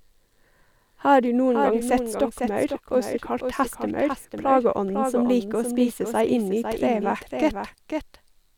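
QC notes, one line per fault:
Throughout, doubled audio track. A second full-band copy of the speech trails the original by about half a second, a few decibels quieter. Every syllable returns as a distinct repeat, not a smeared echo. The copy carries no decay and no room colour, so it sounds like the same recording laid on top of itself. This likely comes from the signal being captured twice, once through a slower path, or from an edit leaving two copies out of step.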